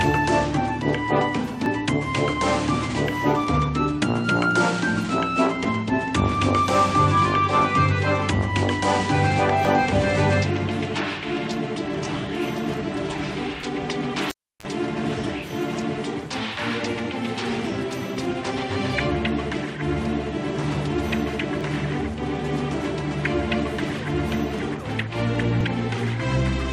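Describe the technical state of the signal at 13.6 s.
At 13.63 s there is an overlap between stream segments: two segments' time stamps overlapped, so the player discarded about 16 ms of audio that was not actually duplicated. The waveform jumps across the gap, heard as a tiny skip, consistent with 4-second segments.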